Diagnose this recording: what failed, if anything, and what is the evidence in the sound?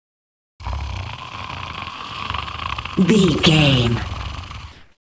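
In the call processing stage, the sender most likely used discontinuous transmission, and the receiver filled the pauses with comfort noise in place of the background. From 0.00 to 0.60 s the real background, sitting about 45 dB below the loud passages, is replaced by steady, featureless noise about 24 dB quieter. It happens again from 4.72 to 5.05 s, about 42 dB down, where the fill runs about 2 dB louder than the real background it replaces.

The opening of the sound at 0.60 s is clipped by the voice detector. It arrives abruptly, with no soft beginning. The likely cause is that the sender's detector reacted late, so the first 30 ms, from 0.57 to 0.60 s, were never sent. The receiver carried its comfort noise through that gap and then jumped straight into the sound already under way. Throughout, the call path's codec leaves nothing above 8 kHz, which fits a wideband call codec.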